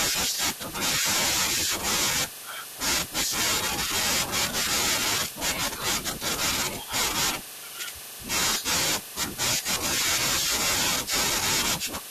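At 1.56 s and again at 7.48 s the speech is broken by damaged data in a compressed stream: corrupted bytes make the decoder misread a frame and resynchronise, leaving a brief disturbance. Each appears as a short disruption on the spectrogram and in the waveform.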